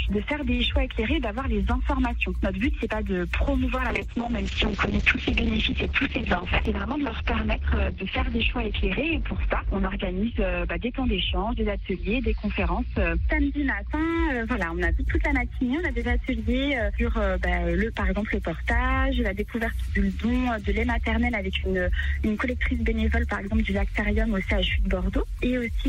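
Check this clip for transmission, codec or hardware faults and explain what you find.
There is one fault, a call bitrate drop from 3.9 to 13.97 s. The bandwidth estimate collapsed, so the encoder was starved of bits, consistent with a fall from around 128 kbps to about 7 kbps. Coding turns coarse and the top end is cut at 6 kHz, leaving the sound muffled and rough, worst for about 5.3 s, before it recovers.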